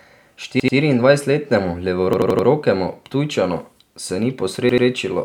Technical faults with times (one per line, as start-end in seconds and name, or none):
0.60-0.77 repeated buffer
2.13-2.47 repeated buffer
4.69-4.86 repeated buffer